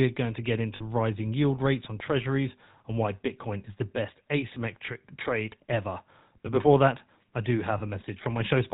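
Speech carries a buzzy, gravelly roughness from start to finish, the plainly audible signature of the GSM full-rate codec, consistent with its 13 kbps rate. A spectrogram shows an empty band above 4 kHz and coarse, smeared harmonics below. Lost GSM frames hold the last sound as a brief metallic ring, seen as a flat, frozen stripe on a spectrogram. This occurs at 0.76 to 0.83 s, about 40 ms (fitting two frames), between "going to get" and "rising yield rates on", at 4.86 s just before "trade ever", and at 7.78 s after "before that I do".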